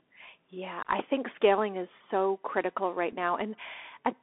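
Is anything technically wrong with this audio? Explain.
Yes, there are two faults. Throughout, the Bluetooth CVSD headset codec applies one-bit up-or-down coding, consistent with 64 kbps, which leaves a 250 Hz to 3.5 kHz band, granular hiss and scratchy sibilants. At 3.12 s, right after "is so critical right", a Bluetooth headset packet was repeated: a lost packet was replaced by the previous one's bits, producing a brief tick.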